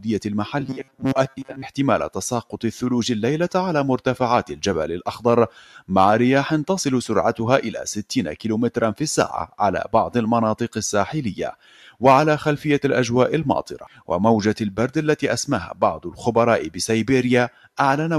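A noise suppressor built for speech is running on this non-speech audio for the whole clip. It treats steady, sustained content as noise, so its gain keeps swinging by roughly 5 dB. Held material and decaying tails are pulled down while sharper onsets pass through, which gives the sound a pumping, fluttering quality and a thinner body than it should have.

At four points the suppressor goes further and turns the sound down harder, treating that stretch as noise. From 5.5 to 5.9 s the level sinks by about 9 dB. From 11.5 to 12.0 s the drop deepens to about 12 dB. Between 13.8 and 14.1 s it again falls by about 12 dB. From 17.5 to 17.7 s it falls by about 9 dB. Each dip is audible as a brief hollowing or truncated decay rather than a clean pause.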